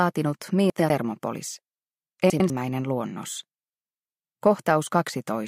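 At 0.7–0.9 s and again at 2.3–2.5 s, chunks out of order: two adjacent 100 ms chunks play swapped, giving a brief jumbled stutter. Waveform and spectrogram show abrupt discontinuities at each 100 ms boundary, with content visibly displaced.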